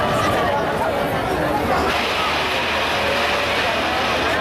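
No technical faults can be heard anywhere in the clip. Nothing in the sound points to a problem in how it was captured, processed or delivered.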